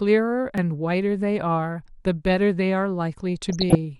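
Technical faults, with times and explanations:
Throughout: MP2 compression. The speech sounds dull and gurgly, with plainly audible granular distortion, likely from MP2 coding at 80 kbps starving upper sub-bands of bits.
0.58 s: dropped buffer (overrun). A tiny jump in the sound, likely because roughly a millisecond or two of samples was overwritten before being read.
3.50 to 3.75 s: DAB burbling. Short noisy blips over the speech, as bit errors slipped past error correction and put noise into single sub-bands across 12 frames.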